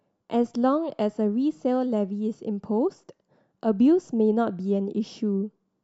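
No technical faults occur at any point, so there is nothing to describe in time order.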